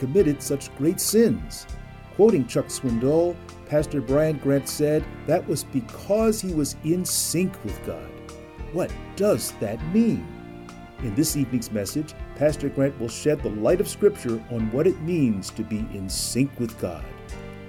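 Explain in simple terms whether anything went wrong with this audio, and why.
Something did go wrong: a video or display buzz runs underneath the audio from start to end. A screen or a video cable nearby leaked electrical interference into the audio wiring, and it comes through as a low, steady buzz at 75 Hz, matching the rate at which the display redraws its picture, with a fizzy hash on top. It sits well below the main sound, so it is quiet but constant.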